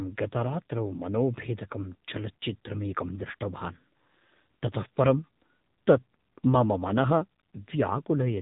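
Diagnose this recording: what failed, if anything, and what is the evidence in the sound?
The codec stage is the culprit here: this speech has gone through the AMR narrowband mobile codec for the whole clip. Everything stops around 3.8 kHz, and the voice is plainly buzzy and synthetic from pulse-driven vocal-tract modelling, which fits one of AMR-NB's lower modes, around 7.4 kbps.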